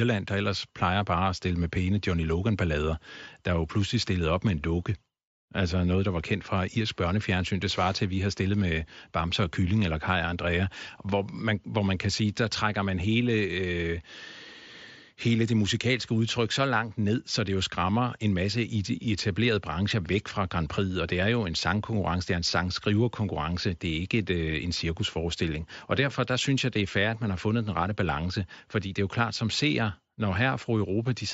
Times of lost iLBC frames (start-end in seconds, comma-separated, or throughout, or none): none